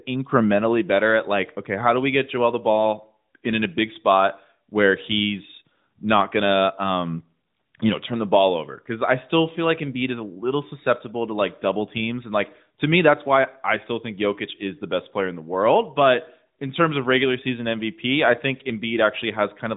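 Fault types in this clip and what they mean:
No faults can be heard in this speech recording.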